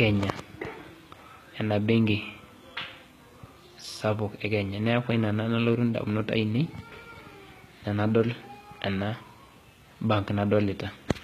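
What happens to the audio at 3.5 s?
At 3.5 s the treble of the speech sounds gritty and metallic, with s sounds turning lispy. This is plainly audible and runs through the whole clip. The likely cause is HE-AAC compression at a low bitrate, around 20 kbps, where the upper spectrum is rebuilt from copied lower bands, so its harmonics no longer line up.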